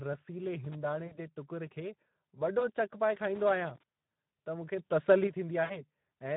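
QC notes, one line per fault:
Throughout: Speex codec. Hoarse, noisy speech with fizzy, noise-like top end, which fits a low setting around 11 kbps starving the excitation of bits.
0.64–0.75 s and 3.35–3.83 s: loose connector crackle. Irregular scratchy bursts as a contact makes and breaks; the second comes right after "चक पाए".
1.05–1.2 s, 2.59–2.67 s, 5.63–5.84 s: VoIP packet loss concealed by the speech codec. Buzzy, fading smears where the decoder extrapolated over gaps of 60, 20 and 60 ms; the first two lead into "जे टुकर" and "चक पाए".
4.78–5.27 s: sudden gain jump. Speech and background jump together by about 6 dB with an abrupt edge, likely a gain change applied without a ramp.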